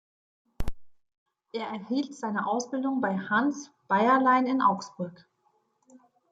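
Nothing goes wrong anywhere in this bit of speech; there's no technical fault to point to at any moment.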